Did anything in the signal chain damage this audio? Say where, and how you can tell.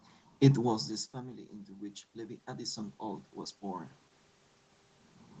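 Yes, call processing: automatic gain rising from 1.12 to 3.96 s, with voice and room noise swelling together about 9 dB as the AGC chases a quieter input.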